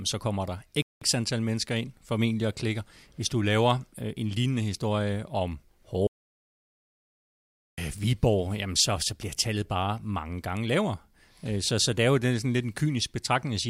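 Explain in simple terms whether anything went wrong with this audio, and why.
The player likely ran short of data or was briefly held up, causing a playback stall: the speech freezes into silence from 0.82 to 1.02 s, then carries on.

The input signal was likely lost for a moment, producing an audio dropout to silence: from 6.07 to 7.78 s everything goes dead quiet, and about 1.7 seconds of speech is missing.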